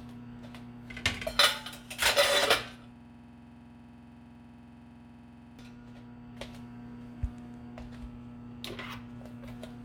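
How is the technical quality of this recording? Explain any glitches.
The recording has one serious glitch: a system hang loop from 2.96 s to 5.59 s. For that stretch the sound stops moving forward. A single 46 ms slice repeats about 57 times, at roughly 21.5 times per second. The computer or its audio driver stalled, while the sound hardware kept replaying the same ring buffer. That loop length fits a 2048-sample buffer. At this rate the repeats blur into a rough, rattling buzz before normal audio resumes.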